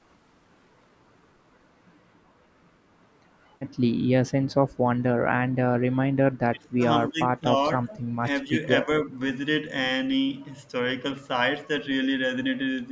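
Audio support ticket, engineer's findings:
Speech suppressed in double talk at 6.49–6.84, 7.09–7.48, 7.80–7.92, 8.44–8.59, 8.83–8.88 and 9.04–9.18 s. Speech dips in short pieces, deepest first (about 30 dB), then roughly 20 dB, then about 10 dB. Likely the echo canceller during overlapping talk, unable to separate near-end speech from loudspeaker echo and attenuating both. Band-limited call path, nothing above 8 kHz.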